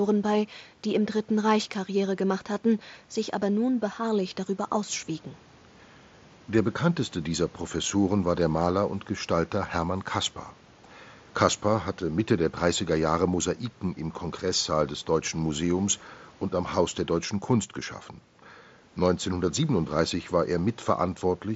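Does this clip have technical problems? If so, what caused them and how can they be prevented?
No, the speech comes through a Bluetooth mSBC headset codec working as designed, with the band topping out at 8 kHz and a faint grain on the louder syllables as expected of that link, so there is nothing to trace or prevent.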